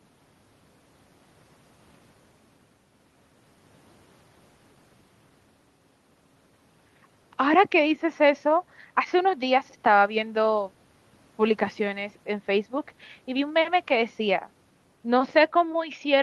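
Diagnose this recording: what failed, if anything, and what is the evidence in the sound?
Nothing in the recording points to a failure at any stage. The speech sits about 40 dB above a quiet room background, and the top end stops at 12 kHz, which fits an Opus call path running at a moderate bitrate.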